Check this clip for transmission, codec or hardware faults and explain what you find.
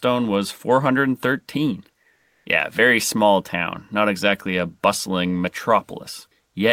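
One fault appears: comfort noise in place of the background, from 2.15 to 2.45 s. The real background becomes steady, featureless hiss for 300 ms, level changing about 1 dB. The likely cause is discontinuous transmission, with the receiver synthesising noise.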